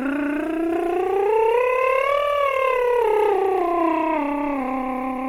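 Throughout the music, tones sound grainy and rough, with a noisy texture filling in where clean detail should be, though the top end stays open up to about 20.1 kHz. This is likely Opus compression, consistent with its music mode at a low rate near 24 kbps.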